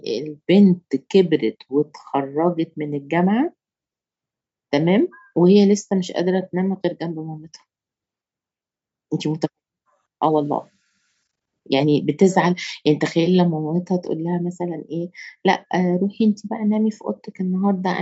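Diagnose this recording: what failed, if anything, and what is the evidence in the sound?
Nothing failed in this recording.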